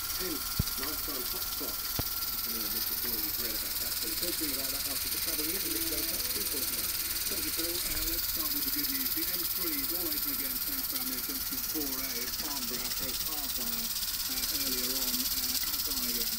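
A loud pop strikes at 0.60 s and another at 1.99 s. Each is a single sharp burst lasting about 0.03 s, the first peaking roughly 20 dB above the surrounding sound and the second roughly 15 dB, while the audio carries on underneath. The likely cause is a sudden voltage step or pulse, from a plug, a switch, static or a driver glitch, entering the signal path and being shaped by the circuitry that follows.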